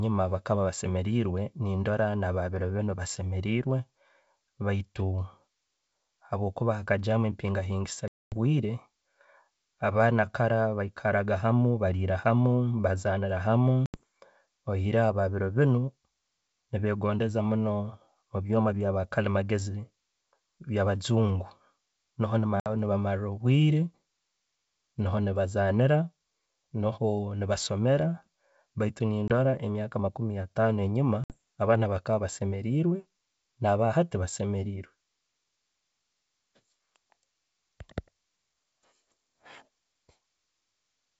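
Packet loss on an ADPCM call breaks the speech at 8.08 to 8.37 s, 13.86 to 14.00 s, 22.60 to 22.69 s, 29.28 to 29.32 s and 31.24 to 31.37 s. Each gap is hard-edged silence, 20 to 240 ms long. Afterwards the decoder's predictor is out of step, so speech returns with brief, slight distortion.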